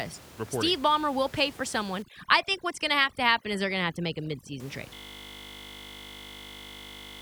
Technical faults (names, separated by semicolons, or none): overdone noise removal; system hang loop